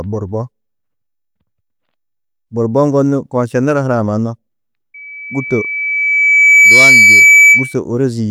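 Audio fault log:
4.94–7.79 s, loudspeaker feedback squeal: a 2.3 kHz tone swells over roughly a second and a half to about 10 dB above the speech, as the microphone re-amplifies its own loudspeaker.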